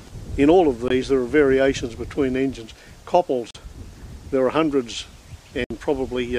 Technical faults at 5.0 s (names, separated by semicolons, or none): none